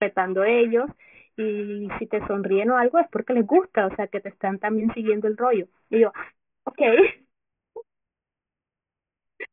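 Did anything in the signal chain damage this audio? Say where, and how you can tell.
Yes. Aliasing runs through the whole clip and points to the sample-rate conversion stage. The speech turns gritty and metallic, with folded energy crowding the band edge at 3 kHz, roughly 15 dB below the signal. That fits a drop from 48 kHz to 6 kHz without an anti-alias filter.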